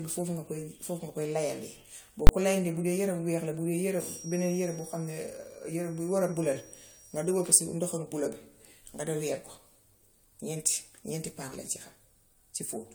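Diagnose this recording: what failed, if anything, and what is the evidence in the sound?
The speech throughout carries a swirly, hollow smearing, and consonant attacks blur more than a 96 kbit/s AAC-LC stream alone would explain. That points to generation loss at the codec stage, likely from around four decode-and-re-encode passes. Each pass quantises on a shifted frame grid, so the errors compound. On a spectrogram this appears as patchy holes and flickering gaps in the upper bands, with nothing above 20 kHz, and as transients smeared in time.

From 2.27 to 2.29 s, just before "ko layandee bu", there is a sharp bang. This is invalid numbers at full scale, a fault in processing or sample-format conversion. A calculation produced infinite or invalid values, which were clamped to the maximum sample value for a 20 ms block. On the waveform it shows as a flat rectangle pinned at one extreme, far beyond the speech peaks, and on a spectrogram as a vertical broadband stripe.

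From 3.89 to 7.61 s a thin, steady whistle at 5.7 kHz sits behind the speech, about 20 dB below it and swelling and fading slowly in level. This is a feedback whistle in the acoustic path, likely a loudspeaker-to-microphone loop held just short of runaway, so one frequency keeps ringing without growing. On a spectrogram it is a narrow horizontal line at 5.7 kHz spanning exactly that interval.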